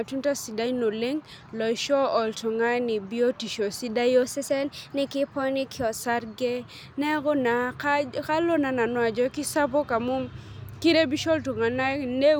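From 4.23 to 5.98 s, the speech plays at the wrong sample rate. Everything runs about 1.09 times too fast and sits about 1.5 semitones high. The voice sounds hurried and slightly higher. The ratio fits 44.1 kHz audio played back at 48 kHz without conversion.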